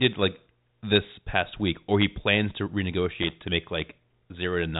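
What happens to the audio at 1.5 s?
Nothing goes wrong at 1.5 s; the speech there passes intact through the G.726 path, with only the narrow telephone band that stops near 3.8 kHz.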